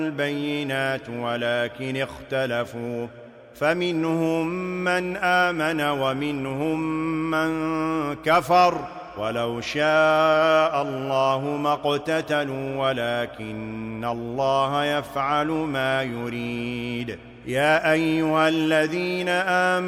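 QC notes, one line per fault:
No faults found: the signal stays continuous across the whole clip.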